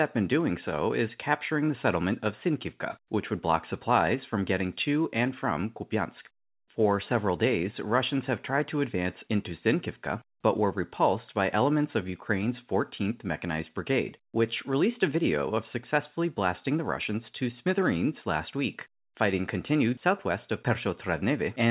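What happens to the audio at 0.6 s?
Nothing goes wrong at 0.6 s: the speech is intact there, carrying only the narrow telephone-band character of the call path, with nothing above about 4 kHz.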